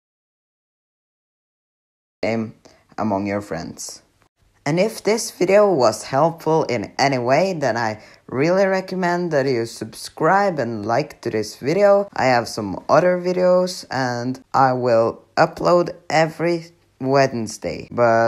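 The clip opens in an audio dropout to silence that is already under way at 0.0 s and lasts until 2.23 s, when the sound cuts in abruptly mid-flow. The gap holds silence with no room tone or hiss, most likely because the input was lost while the recorder kept writing silence. On a waveform it appears as a flat line, and on a spectrogram as a blank band, ending in a hard vertical edge.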